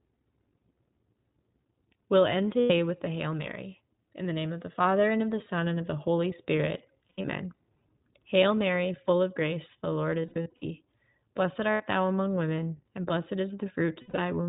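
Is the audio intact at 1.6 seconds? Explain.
No, not really. At 1.6 seconds, like the rest of the speech clip, you're hearing the iLBC codec at work. It's a narrowband VoIP codec, so everything above 4 kHz is gone, and it codes each 20 ms frame's excitation on its own without borrowing from the previous frame. That's where the plainly audible roughness and slightly synthetic edge come from, which fits its higher-rate mode of about 15 kbps.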